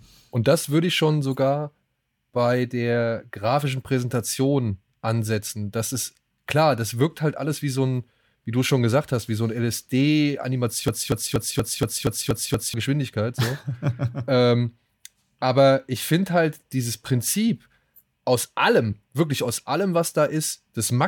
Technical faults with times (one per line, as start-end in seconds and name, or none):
10.88-12.74 broken-record loop